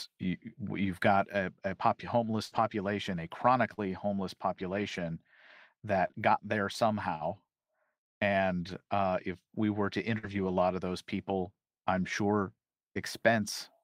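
Between 2.45 and 10.53 s, just before "lot of those people", the speech shows scattered short gaps: around seven brief losses, none longer than about 70 ms, each patched by stretching the preceding sound forward. Roughly a fifth of a second goes missing across the span, only a few percent of it, so the speech stays clear but picks up small ticks, smears and hiccups. Unlike one long dropout, these are isolated, widely spaced blips with no silence or muting.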